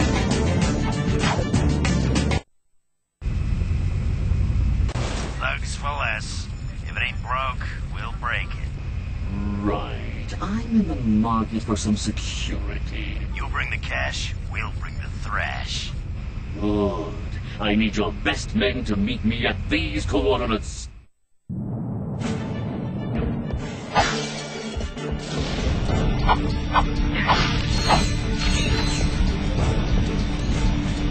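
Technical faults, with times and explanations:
No technical faults can be heard anywhere in this clip.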